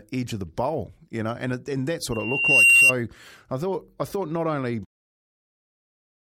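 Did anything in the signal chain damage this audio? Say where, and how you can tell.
Yes: loudspeaker feedback squeal, 2.12 to 2.94 s, in the analogue microphone-to-loudspeaker path. A 2.8 kHz tone swells over half a second to about 15 dB above speech, so loop gain exceeded one.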